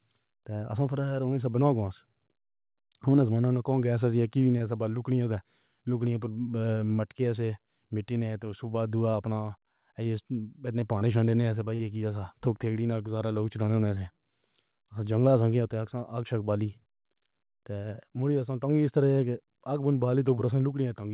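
Brief smears and wobbles interrupt the speech at 4.58–4.62 s right after "کون گیس ایک ہی", at 9.12–9.15 s after "تو اُس کے بعد", at 10.99–11.03 s just before "چھانے سے", at 11.75–11.81 s (the longest, about 40 ms), and at 13.95–13.98 s. Each is short concealed packet loss: 20 to 40 ms of audio arrived too late, so the receiver stretched the preceding sound to fill the gap before rejoining the real signal. All of this sits inside call audio with nothing above 4 kHz, which fits G.711.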